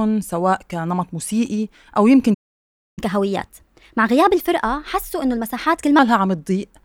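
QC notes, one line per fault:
2.34 to 2.99 s, playback stall: The speech just cuts out mid-flow and the output sits silent for about 0.63 s before picking up again. It doesn't sound like a dropout in the recording itself. The gap is clean dead air, and the cause is likely the player running dry on buffered data or its thread getting held up, so nothing reached the output until it recovered.
2.99 to 5.99 s, catch-up at higher speed: Right after the gap, the speech comes back running fast, about 1.15 times normal speed for a full 3 s, with pitch nudged up roughly two semitones. That's the player working through its backlog by resampling, so speed and pitch rise together. It's how it claws back the time lost in the stall. Around 5.99 s it drops back to normal rate and pitch.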